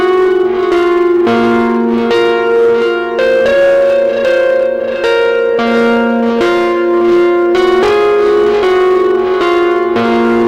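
Hard clipping runs through the whole recording of everyday sounds: the signal was driven about 6 dB past what one stage could pass, so around a tenth of samples were cut flat. The waveform shows flattened tops, and spectrograms show added harmonics reaching high up, heard as crackle on loud moments.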